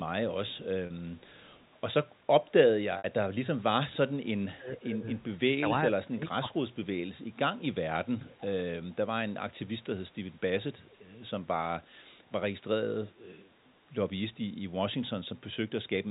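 At 0.86 s there is packet loss with pitch repetition. About 40 ms of audio is missing, which fits two lost packets. The receiver fills the gap by repeating the last pitch period, so the sound briefly holds with a buzzy edge.

From 1.18 to 1.64 s, a faint delayed copy of the speech returns about 417 ms late. This is echo leak. The likely cause is a loudspeaker on the far side whose echo canceller let part of the pickup through. Short scraps recur at 2.45 and 3.92 s.

At 2.98 s, a 60 ms loss gets the same pitch repetition. It is a little longer.

From 4.57 to 5.04 s and from 5.61 to 6.61 s, speech is suppressed in double talk. Both sides talk at once. The canceller likely mistakes this talker for echo and turns it down, by about 15 dB and then about 20 dB, so the voice dips.

The echo leak returns from 8.21 to 8.42 s, louder but still well below the speech. It comes back once more, very faint, from 12.24 to 12.32 s.

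Throughout, the G.711 telephone coding limits the band to below 4 kHz.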